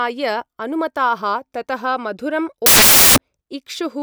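A short speech recording, and from about 2.66 s to 3.18 s it turns into loud, harsh broadband noise. That's samples built from the wrong bytes. The reader put each sample's bytes together wrongly, either off by one byte, in swapped order, or at the wrong alignment. So the fast-flickering low bits end up as the big part of every value. Then it clears for the rest of the clip.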